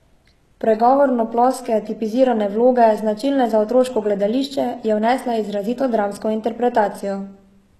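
Throughout, s sounds are gritty and lispy with nothing above 12.3 kHz, likely HE-AAC compression faking the treble, pointing to a bitrate near 16 kbps.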